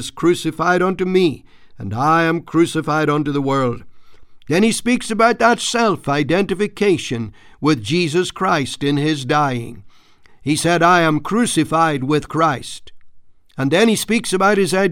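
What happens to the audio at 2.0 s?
Nothing goes wrong at 2.0 s; the speech carries on intact through that moment.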